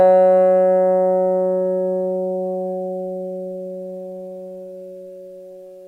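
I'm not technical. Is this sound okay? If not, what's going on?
Yes, nothing wrong can be heard anywhere in this sound.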